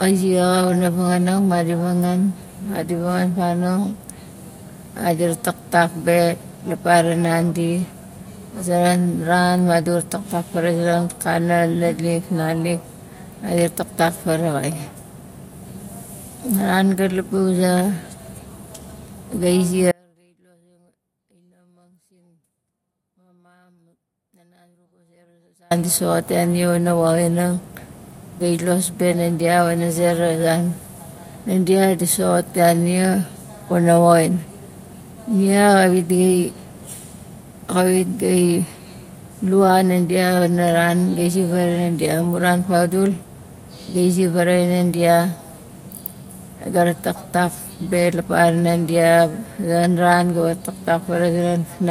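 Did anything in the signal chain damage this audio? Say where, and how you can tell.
Yes. The speech has an audio dropout to a faint residue from 19.92 s to 25.71 s, about 5.8 s. The level falls abruptly, not as a pause or fade, to a faint sound about 40 dB below the normal signal, and the speech returns just as suddenly at "di soxot ya". The stage was likely the analogue wiring: the wanted signal was interrupted upstream while the downstream path stayed live, so only a weak leak remained.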